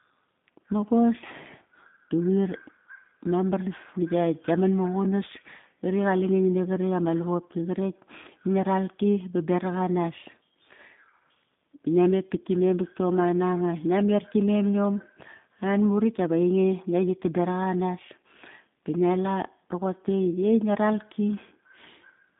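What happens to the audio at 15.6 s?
At 15.6 s the speech sounds muffled and slightly rough, with a synthetic, buzzy edge. That coloration runs through the whole clip and is not tied to this moment. This is G.729 codec damage: nothing above about 3.8 kHz survives, and the line band sits at roughly 150 Hz to 3.6 kHz. The codec rebuilds each short frame from a vocal tract filter, a pitch predictor and a few pulses, a sound that fits an 8 kbit/s G.729A link.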